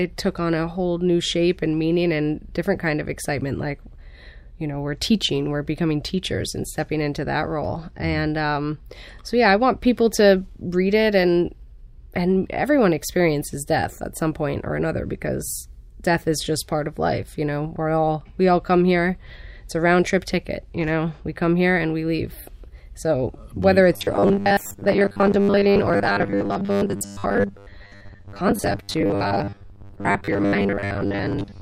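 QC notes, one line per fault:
23.94–31.62 s, robotic sound from repeated short buffers: a rigid, metallic 100 Hz buzz over the speech, likely from a 10 ms buffer replayed through most of that stretch.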